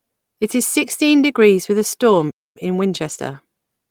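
Just after "sixteen degrees with a", from 2.09 to 2.19 s, there is a lost packet rebuilt from error correction. About 60 ms of speech, which fits three separate lost packets, was filled from the low-bitrate copies carried in the following packets, so there is no gap, only a rougher, noisier patch.

At 2.30 s the output cuts to silence mid-flow for about 250 ms, a playback stall. The player most likely ran short of data or was blocked, and audio resumes at 2.57 s.

From 2.57 s to the end, time-compressed catch-up runs at about 1.15 times normal speed. Small pieces are cut out and cross-faded to shrink the backlog, so the speech sounds hurried at unchanged pitch.

Within that stretch, from 3.05 to 3.35 s, a second lost packet rebuilt from error correction covers 160 ms, consistent with eight lost packets. The reconstruction is rough and noisy.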